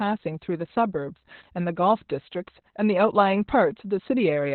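From start to finish the speech sounds muffled, hoarse and faintly robotic, with nothing above about 4.4 kHz. The cause is Opus voice compression at roughly 8 kbps: the SILK coder narrows the band to narrowband and codes the excitation coarsely, causing heavy damage.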